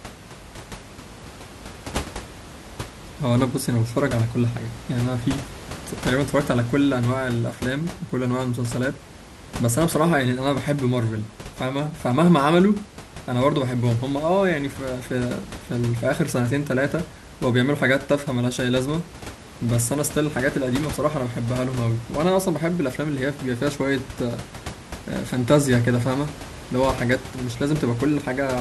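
No technical faults can be heard in this speech recording. A room noise sits about 15 dB below the speech, picked up along with it by the microphone.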